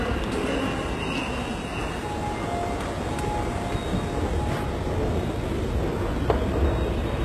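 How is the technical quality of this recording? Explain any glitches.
Technical quality is poor throughout, with plainly audible codec damage. The treble sounds gritty and metallic and stops at 12.3 kHz, likely from HE-AAC compression, which fits a low bitrate around 16 kbps and rebuilds highs by copying lower bands upward.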